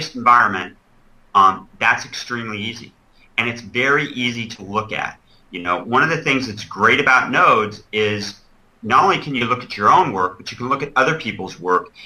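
The audio has four short concealed packet losses, at 0.37 to 0.41 s, 4.55 to 4.60 s, 5.60 to 5.67 s and 9.38 to 9.43 s. Each hole runs 20 to 40 ms, which fits one or two lost 20 ms packets. The receiver patched each gap by extending the last sound, either at its pitch or as shaped noise, then blended back. Each one is heard as a brief smear or wobble.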